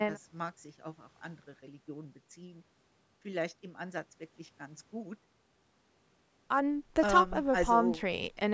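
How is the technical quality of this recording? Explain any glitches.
No glitches or technical faults can be heard here.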